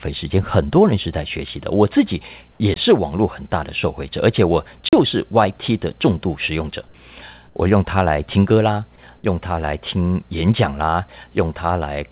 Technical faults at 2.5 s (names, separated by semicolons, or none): comfort noise in place of the background